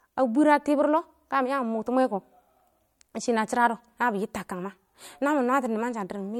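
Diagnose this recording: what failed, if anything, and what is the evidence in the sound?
Codec stage: low-bitrate audio saved at a high bitrate. Throughout the speech, content ends abruptly at 18 kHz and MP3 smearing remains, likely from a 64 kbit/s-class encode later resaved near 192 kbit/s. A spectrogram shows a flat ceiling and patchy upper bands.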